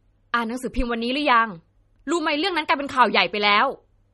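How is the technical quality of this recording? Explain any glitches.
Quality is noticeably degraded by lossy compression. MP3 compression runs throughout, likely from a low bitrate around 32 kbps: nothing survives above 11.8 kHz, and weak frequency lines flicker between frames, giving watery, swirly speech with smeared attacks.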